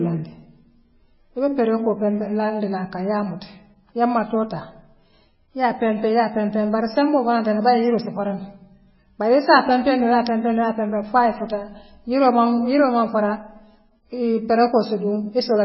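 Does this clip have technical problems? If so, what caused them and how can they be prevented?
Yes. Throughout the speech, everything above 5.6 kHz is simply gone, and what's left has a watery, swirly texture, with s sounds turning chirpy and consonant onsets smeared. That's likely MP3 compression pushed hard, at a bitrate that sounds like it sits down around 16 kbps. With so few bits, the encoder chops the treble at a fixed cutoff and drops quieter frequency lines that flicker in and out between frames. To prevent it, encode at a much higher bitrate, or keep a lossless copy.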